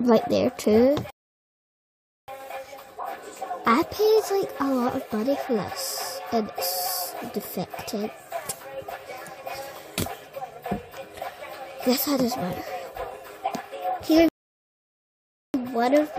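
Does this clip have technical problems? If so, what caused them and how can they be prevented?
Yes. There are two rebuffering stalls, from 1.10 to 2.28 s and from 14.29 to 15.54 s, adding about 1.18 s and 1.26 s of silence. Each time the player used up its downloaded audio and paused until more arrived. Unlike a dropout, the sound picks up exactly where it stopped, so nothing is skipped and the clip only gets longer. A larger playback buffer, with adaptive bitrate dropping quality before the buffer empties, would prevent it.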